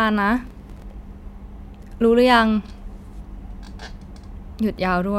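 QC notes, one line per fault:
0.47–0.90 s: processor overload crackle. The speech breaks into a gritty, crackling burst. Around fifteen buffers of roughly 3 ms each miss their deadline and drop to silence. Each hard-edged gap clicks, and together they tear across the sound until the load clears.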